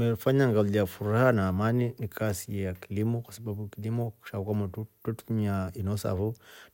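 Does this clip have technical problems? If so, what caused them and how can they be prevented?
No, nothing technical goes wrong anywhere in this speech clip, so there's no cause to track down and nothing that needs preventing.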